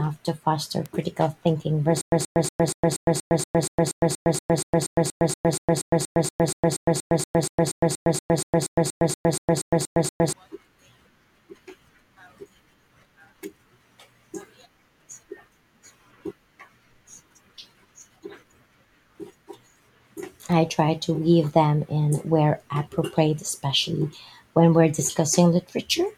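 At 0.86 s, between "to foster" and "critical thinking", a bit error spike gives one sharp, broadband tick. A single flipped bit in one sample makes the value jump by a power of two, then it snaps back. The tick has no relation to the speech.

From 2.01 s to 10.33 s, after "to foster critical thinking", comes stutter with silent gaps. The same 127 ms burst repeats 35 times. Each is followed by about 111 ms of digital silence, giving a steady 238 ms cycle. The likely cause is a stalled stream replaying its last fragment on each retry. The speech meant for that span is lost.

At 20.52 s, just before "try to weave them", a second bit error spike produces another lone click from one corrupted sample.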